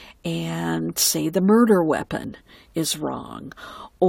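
An overlap between stream segments occurs at 2.24 s, near the boundary between two 2.0-second segments. Their timestamps overlapped, so the player trimmed a few milliseconds of speech that was never actually duplicated. The waveform jumps abruptly there, producing a tiny skip.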